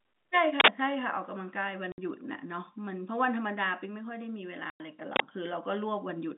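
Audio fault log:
0.60 to 0.68 s and 5.16 to 5.20 s, uninitialised buffer: Two short, very loud bursts of harsh digital noise cut into the speech. The first lasts 80 ms, the second 40 ms. Each time, a block was sent to playback before any audio was written into it. Whatever data sat in that memory was played as if it were samples. The result is loud noise with no link to the speech, so it jumps out sharply.
1.92 to 1.98 s and 4.70 to 4.80 s, packet loss filled with silence: The speech drops out completely twice, for 60 ms and then 100 ms. The gaps have hard edges. Packets went missing, and the receiver played pure silence in their place. It did not conceal the loss. Both gaps are whole multiples of 20 ms, which fits 20 ms packets. Around the gaps, the band-limited telephone sound is intact.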